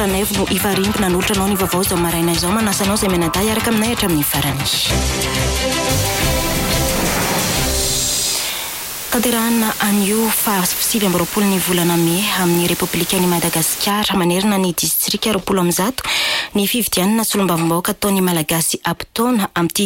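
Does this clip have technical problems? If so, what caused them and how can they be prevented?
Yes. From 5.90 to 13.90 s, low bit depth with dither: only 4 bits, dither turns rounding error into steady hiss, about 10 dB below the signal. Prevent it by keeping adequate bit depth.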